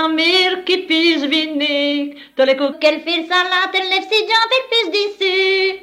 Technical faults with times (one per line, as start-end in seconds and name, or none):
2.73-5.83 section at the wrong speed